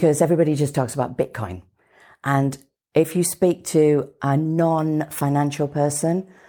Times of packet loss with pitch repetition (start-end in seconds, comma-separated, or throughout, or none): none